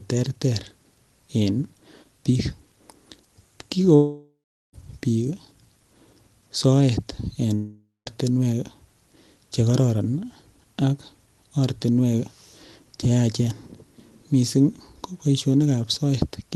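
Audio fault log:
3.95–4.75 s and 7.55–8.08 s (after "soet en"), long network dropout: packets likely stopped arriving, so the receiver extends the last sound into a fading buzz, then silence, and resumes with the gap lost.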